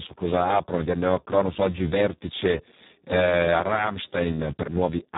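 Throughout, heavy Speex codec damage renders the speech hoarse, noisy and near-robotic, consistent with a very low setting around 4 kbps; spectrograms show smeared harmonics and nothing above 3.8 kHz.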